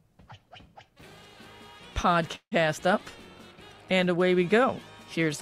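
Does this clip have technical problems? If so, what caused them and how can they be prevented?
Yes. At 2.35 to 2.60 s the sound stalls into a fading buzz or hiss, then silence. This call audio freeze likely came from delayed packets emptying the jitter buffer. Nothing is lost: the audio resumes where it stopped, about 0.16 s late. A larger or adaptive jitter buffer and a steadier network path would prevent it.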